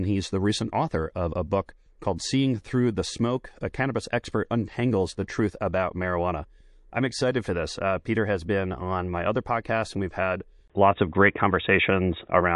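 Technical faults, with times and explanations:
Throughout, MP3 compression: the speech sounds watery and swirly, with smeared consonants and dulled treble, damage plainly audible. The encoder was likely starved of bits, fitting a rate near 48 kbps. It dropped weak frequency lines, which flicker between frames, and cut the top.
1.66 s, pre-echo: just after "recent author of a", a hiss rises about 11 dB and runs for 25 ms before a sharp onset. The codec spread its noise across a 48 ms block. No shorter block was used to contain it.
10.68 to 12.55 s, input switched to a poorer device: after "podcast and we've had", a 20 ms gap is followed by duller, boxier sound. Nothing is left above 3.8 kHz. The level shifts by roughly 5 dB. New background noise sits roughly 50 dB down, likely from another microphone or headset.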